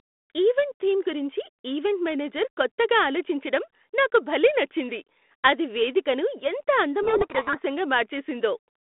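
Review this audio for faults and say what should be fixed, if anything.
From 7.02 to 7.60 s there is a codec payload misread: the receiver unpacks the G.726 code words wrongly, and the sound points to a reversed bit order within each code word. The decoder takes these scrambled values as genuine prediction differences, so for that stretch the speech sinks under harsh, grinding distortion, in contrast to the narrowband telephone sound before and after, which fits G.726 at 32 kbit/s. To prevent it, both ends should negotiate and confirm the same G.726 packing order before sending audio.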